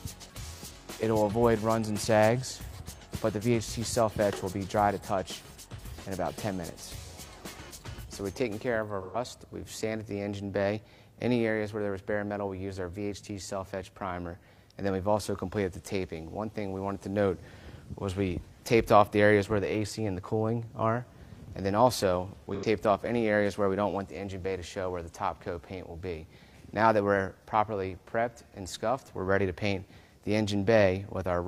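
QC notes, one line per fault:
9.01–9.17 s and 22.54–22.65 s, AAC frame loss with concealment: the decoder lost about 128 ms and 85 ms of data, which fits three and two AAC frames, and rebuilt each gap from the last good spectrum. This leaves brief smeared, noisy or phasey patches.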